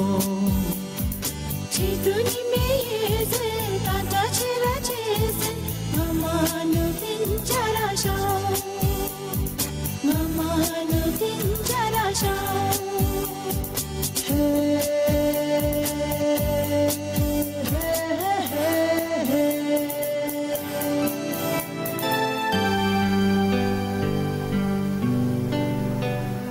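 Gain pumping runs through the whole clip, with the gain swinging by roughly 25 dB and leaving everything squashed. The likely cause is input gain set far too high, with a fast limiter clamping down.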